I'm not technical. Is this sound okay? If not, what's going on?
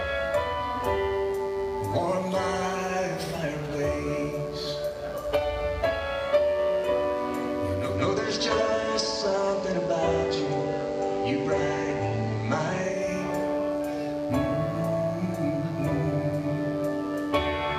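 No. Two things are wrong. First, there is a mains buzz running through the whole clip: a steady, raspy hum, quiet but always there, coming from the 50 Hz electricity supply leaking into the equipment, for example through a dimmer or a poorly shielded cable. Unlike a pure, smooth hum, it sounds gritty because sharp electrical spikes add many higher tones on top of the low drone.

Second, from about 7.7 to 13.1 seconds there is digital radio blending to analogue. The receiver lost its digital signal and switched over to the ordinary FM broadcast of the same station, then back. Each switch is a soft cross-fade lasting about a third of a second. During that stretch a gentle hiss appears. What sets this apart from a plain dropout or interference is that the sound never stops; its quality changes, then returns.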